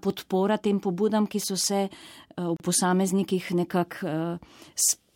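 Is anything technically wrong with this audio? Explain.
Yes, there's a gap at a join of encoded pieces around 2.57 to 2.60 s. The sound just drops out for roughly 35 ms and then picks up right where it left off. That's what you get when separately encoded chunks are butted together without trimming: the encoder's start-up delay and the padded final frame both stay in as silence. The edges are smeared by the codec, so the truly silent part is shorter than the full gap.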